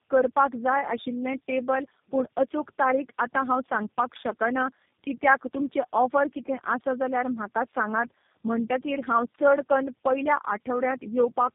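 Tandem speech coding runs through the whole speech clip: the sound is rough, muffled and warbly, with nothing above 3.8 kHz, which points to a chain of three low-rate speech codecs, each re-encoding the previous codec's already degraded output and compounding the damage.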